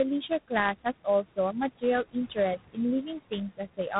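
Throughout, noise suppressor artifacts sit on the speech. The suppressor pulls down the room noise, which lies about 14 dB below the voice, by about 19 dB between phrases. It lets the noise back up under the speech. So the background pumps in and out.

Tandem speech coding runs through the whole clip too. The sound is rough and noisy. Nothing is heard above 3.8 kHz. This fits two low-rate ADPCM coders in a row, likely G.726 at 24 kbit/s on each side of a G.711 link. The second coder has to re-encode the first one's errors, so the damage adds up.

At 2.04 to 2.37 s, speech cut by the noise suppressor appears. The suppressor treats part of the speech as noise and drops it by up to about 21 dB. Roughly a tenth of a second of sound is swallowed. It comes out faint, as if it were cut off.

The same thing happens at 2.57 to 2.78 s, with a drop of about 18 dB. Again about a tenth of a second fades into the background.

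A third cut runs from 3.5 to 3.92 s. It goes down by about 16 dB, and about a tenth of a second of the speech sounds soft and clipped short.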